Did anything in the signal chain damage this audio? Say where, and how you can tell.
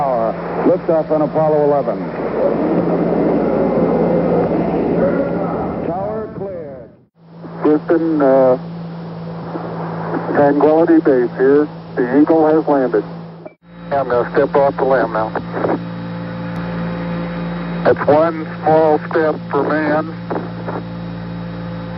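No, nothing along the signal chain has left an audible mark on this audio, which holds steady with no interruptions or disturbances at any point.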